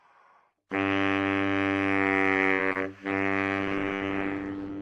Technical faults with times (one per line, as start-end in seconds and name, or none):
2.45-2.77 repeated packet loss (robotic sound)
3.12-4.81 call bitrate drop